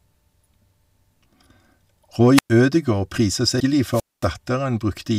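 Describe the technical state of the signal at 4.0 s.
At 4.0 s the speech is inside a wireless microphone squelch dropout running from 3.91 to 4.27 s. The FM radio link fades, hiss briefly swells, then the receiver's squelch mutes for about 228 ms. That rising static before the hole separates it from a digital packet-loss gap.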